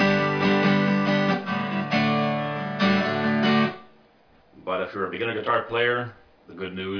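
Nothing in the audio stands out as a technical problem, so there's no fault here to point to.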